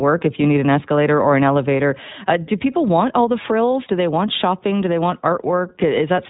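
From start to finish the speech passes through the iLBC codec, coding each frame independently at what sounds like 20 ms frames, cutting everything above 4 kHz and leaving a plainly rough, synthetic edge.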